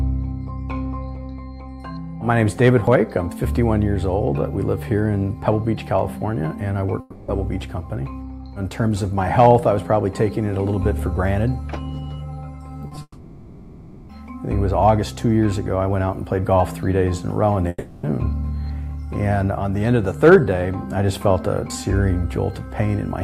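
A stage overloads by about 2 dB from 2.64 to 2.95 s, and by about 3 dB at 9.39 to 9.56 s and 20.24 to 20.36 s. This hard clipping flattens the peaks into a brief harsh crackle. From 7.00 to 7.29 s, a long network dropout likely lost 280 ms of audio, which the receiver bridged with a fading continuation of the last sound. Short concealed packet losses at 12.87 to 12.92 s, 12.95 to 12.97 s and 12.98 to 13.01 s leave small smeared patches, and then another likely dropout runs from 13.02 to 14.10 s. That one fills just over a second with a decaying buzz or hiss that ends in a brief silence. A third likely dropout, from 17.68 to 18.04 s, blanks 350 ms the same way, with a near-silent moment before the audio returns.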